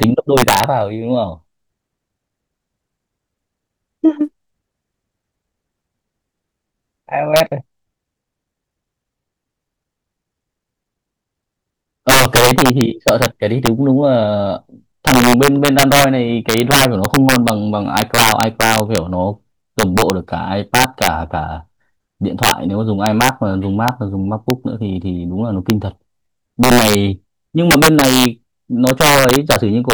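Integer overflow runs through the whole speech clip. The signal was pushed about 6 dB past full scale, and instead of being limited, each sample that exceeded the largest integer value wrapped around to the opposite extreme. Only a small fraction of samples, under one percent, cross that limit, so the damage is confined to the loudest peaks. There each one produces a violent, full-range crack, far harsher and more abrupt than the flattening of ordinary clipping.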